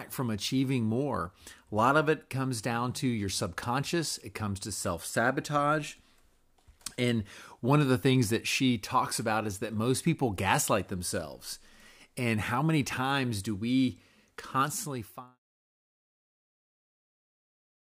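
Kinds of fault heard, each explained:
Nothing stood out as a fault on listening to this speech, and the gentle fade-out at the end sounds like an ordinary edit.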